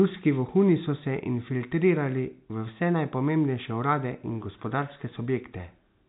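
No technical faults occur at any point in the speech, which comes through G.711 telephone coding with nothing above about 3.9 kHz.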